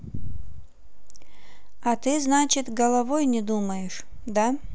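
Nothing stood out as a technical fault anywhere in the speech on listening.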